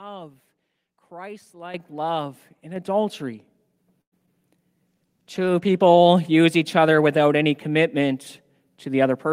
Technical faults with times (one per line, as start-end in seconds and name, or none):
1.74 microphone volume stepped up
2.76 microphone volume stepped up
3.78 microphone volume stepped up
4.01-4.14 call audio freeze
4.26-4.29 short concealed packet loss
4.87-6.17 call bitrate drop